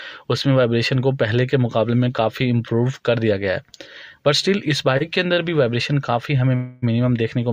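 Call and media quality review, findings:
Short stall from a late packet, 4.97–5.02 s and 5.34–5.39 s. Sound held too long, slight buzz or dip, about 30 ms each. Component: jitter buffer. Late packet, buffer empty, receiver stretches last audio until arrival, then resumes at the same point. Nothing lost; playout delay grows about 30 ms per event, about 60 ms total across the two.

Call audio freeze, 6.55–6.94 s. Sound continues as a fading buzz or hiss for about 270 ms, with no drop to silence, then playback resumes where it stopped. Nothing missing; delay grows about 270 ms. Likely cause: packets held up in transit, emptying the jitter buffer, with receiver concealment filling the gap.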